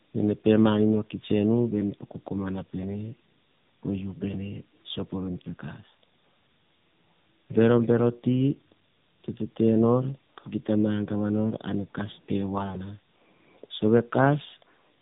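Tandem speech coding runs throughout the clip. The speech passed through two low-rate narrowband coders in succession, consistent with AMR-NB, the second re-encoding the first's degraded output. The result sounds rough, muffled and warbly, with nothing above 3.8 kHz.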